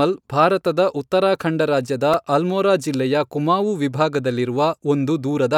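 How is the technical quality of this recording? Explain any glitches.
One glitch affects the recording, a repeated buffer at 2.14 s, between "ಭಾರತದ ಉತ್ತರಾಖಂಡ ರಾಜ್ಯದ" and "ಅಲ್ಮೋರಾ ಜಿಲ್ಲೆಯ ಕುಮಾವು". Fresh audio arrived late, so the playback device replayed its last tiny block several times over, which fits a 64-sample buffer of about 1.45 ms. Those hard-joined repeats produce a brief click or buzz, and essentially no speech is lost.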